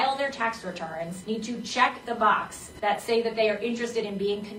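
At 2.71 s an AAC frame loss with concealment interrupts the audio for about 43 ms, ending at 2.80 s, a gap that fits a single lost frame. Instead of the real signal, the decoder rebuilt that stretch from the last good spectrum, so it sounds like a brief smeared, noisy patch. On a spectrogram the band shows a blurred block that copies the preceding spectral shape. The waveform loses its fine detail there, with a soft, irregular envelope.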